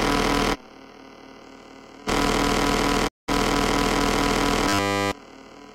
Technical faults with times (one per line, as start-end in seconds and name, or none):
3.07-3.30 digital broadcast dropout
4.69-5.12 robotic sound from repeated short buffers